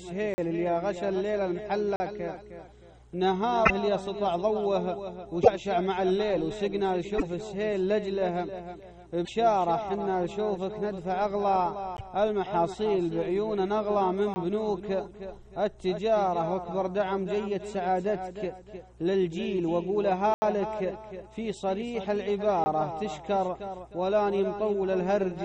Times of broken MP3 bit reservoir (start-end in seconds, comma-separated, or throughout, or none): 3.65-3.71, 5.42-5.48, 7.17-7.23, 9.24-9.29, 11.95-12.01